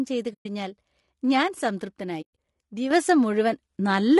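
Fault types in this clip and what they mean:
Low-delay AAC compression: Throughout the speech there is plainly audible coding damage, most likely from AAC-ELD, the short-frame AAC used for video calls. Its brief frames resolve voice harmonics poorly, and the roughness points to a low rate, around 32 kbps. The voice sounds grainy and rough. On a spectrogram, noise fills the gaps between harmonic lines and the upper band looks smeared or flattened. The waveform shows no single event.
AAC frame loss with muting: Coded frames went missing and the decoder replaced them with silence, so the sound fades out and back in through overlapping windows. The first hole, 0.33 to 0.46 s, lasts 120 ms. The second, 2.21 to 2.36 s, spreads 140 ms of loss over 160 ms, its longest gap about a tenth of a second. The spectrogram shows blank vertical slots, and the waveform shows tapered dropouts.
Sudden gain jump: At 2.91 s the level steps up by about 6 dB in a single sample, likely a gain setting or bit shift applied without a ramp, and it stays raised until the end. 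Speech and background noise rise together, so the jump is heard as an abrupt loudness change. The waveform envelope shows a sharp vertical step, and the spectrogram brightens across all frequencies from that instant onward.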